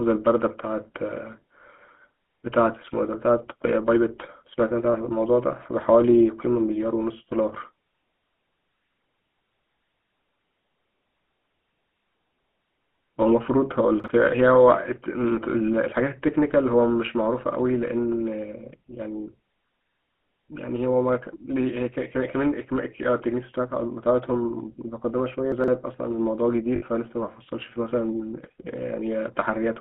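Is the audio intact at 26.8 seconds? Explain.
No. From 26.76 to 26.83 s, lost GSM frames were concealed by repeating the last good frame, giving a rough metallic ring. The 60 ms gap fits three lost 20 ms frames. On a spectrogram it shows as a frozen, smeared band.

Underneath, the GSM full-rate codec is audible throughout as buzzy, gravelly roughness. Its pulse-driven coding fits a 13 kbps stream, and the spectrogram shows nothing outside about 200 Hz to 3.5 kHz.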